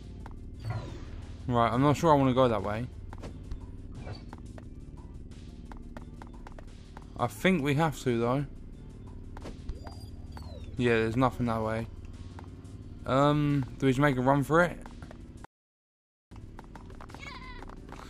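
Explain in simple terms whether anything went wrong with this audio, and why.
The sound cuts out at 15.45 s and stays silent until 16.31 s, almost a second. That's a playback stall, likely the player briefly running out of data.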